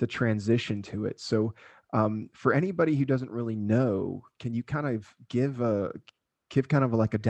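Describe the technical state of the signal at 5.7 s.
At 5.7 s the speech signal is intact, with no technical fault present at that moment.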